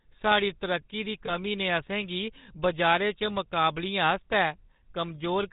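This speech clip has been through the GSM full-rate codec, and the damage is plainly audible: a buzzy, gravelly roughness over the voice and nothing above 4 kHz, which fits the old 13 kbps full-rate coder with its pulse-driven vocal-tract model. Right after "तरक्की दी", from about 1.26 to 1.31 s, there are lost GSM frames. The decoder holds the previous frame's settings, so you get a brief rough, metallic ring. It's short enough to fit a single lost 20 ms frame.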